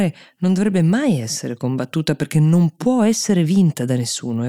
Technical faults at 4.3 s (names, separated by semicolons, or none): resampler restarted on every block